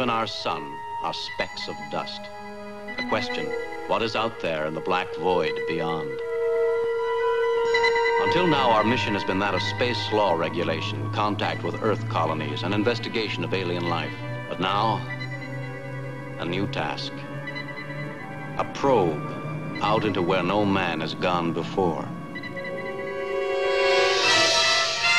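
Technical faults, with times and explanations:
Nothing technical goes wrong anywhere in this recording, so there's nothing to flag.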